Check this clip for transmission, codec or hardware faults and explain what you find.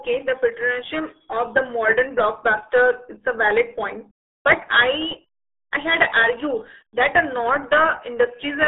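One fault runs through the whole speech clip: RealAudio 14.4 codec damage. A low-rate coder, consistent with 8 kbit/s, passes only 250 Hz to 3.6 kHz, so speech sounds muffled and gargly. A spectrogram shows an empty band above 3.8 kHz.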